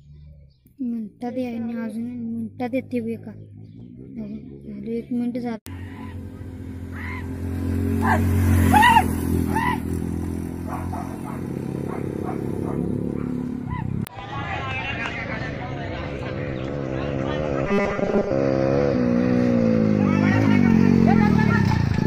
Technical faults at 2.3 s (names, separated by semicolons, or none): none